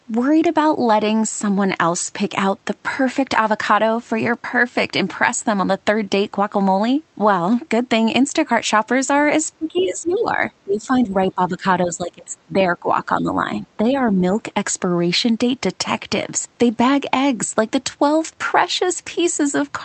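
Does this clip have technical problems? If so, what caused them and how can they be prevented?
Yes. From 9.54 to 14.41 s the speech is suppressed in double talk: the level dips by up to about 15 dB across roughly four seconds, likely because the echo canceller turned both talkers down while both spoke. The waveform envelope sags in patches. Tuning the echo canceller's double-talk detection, or using a headset, prevents this.

The other side's voice leaks through in two brief scraps, at 9.76 to 9.87 s and 10.08 to 10.22 s, about 20 and 25 dB below the speech. This is likely residual loudspeaker echo the canceller missed. A spectrogram shows faint, separate harmonic traces under the main speech. Lower speaker volume or a headset prevents it.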